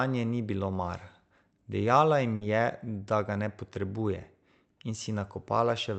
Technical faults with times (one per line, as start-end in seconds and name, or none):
2.35-2.44 burst of packet loss